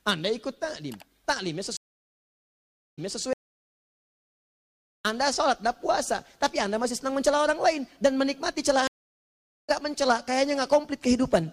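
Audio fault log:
1.77–3.23 s and 8.87–9.70 s, stream reconnect: the connection drops, the player goes silent while it reconnects, then a fresh decoder picks up mid-stream. The first gap lasts about 1.2 s and playback resumes 0.26 s earlier, so a short stretch repeats, consistent with the server resending buffered data. The second gap lasts about 0.8 s and resumes roughly 0.7 s later, so that portion is skipped, as on a live feed that moved on.
3.33–5.05 s, audio dropout to silence: the sound cuts off abruptly and returns mid-flow after 1.72 s of silence, with no room tone or background left in the gap. Whatever occurred in that span is missing rather than delayed. The likely cause is a loss of the input signal, such as a disconnected device, a failed link or a stray mute, while the recorder kept writing silence.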